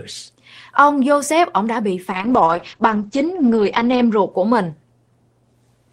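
At 2.12 s the speech turns rough and muffled. This is a call bitrate drop. The connection's bandwidth estimate fell, so the encoder had to spend far fewer bits. The coarser coding sounds watery, which fits a fall from about 32 kbps to about 10 kbps. The top end also vanishes: the audio band narrows from 20 kHz to 8 kHz. The worst stretch lasts about 1.9 s. Full quality returns at 4.37 s.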